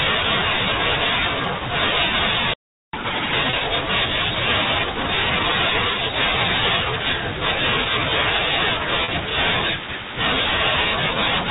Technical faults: playback stall; catch-up at higher speed; packet loss with pitch repetition

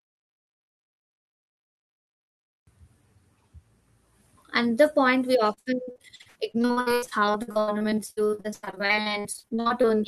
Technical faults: repeated packet loss (robotic sound)

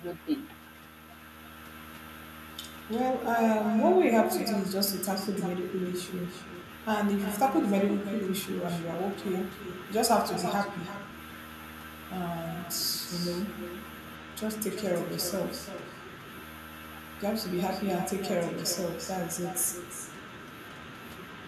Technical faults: echo with no canceller

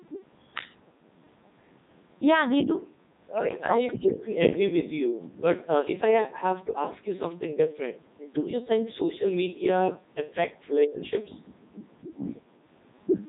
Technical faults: Codec 2 vocoder; speech suppressed in double talk

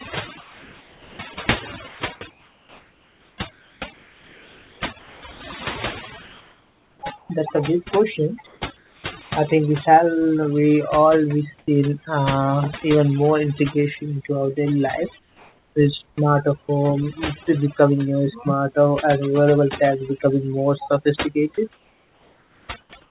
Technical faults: overdone noise removal; sound chopped by the voice detector; comfort noise in place of the background; sound dropped by the voice detector

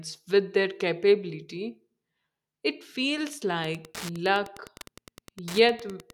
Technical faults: Wi-Fi interference

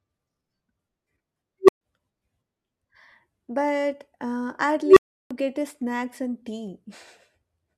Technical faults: unstable filter

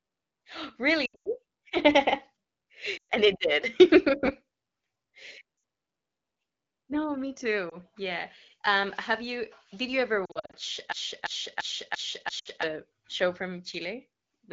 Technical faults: lost AMR speech frames; system hang loop

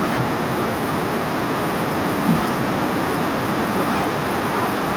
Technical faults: none

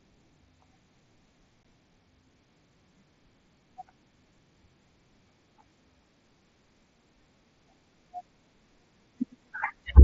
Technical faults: unconcealed Bluetooth headset packet loss

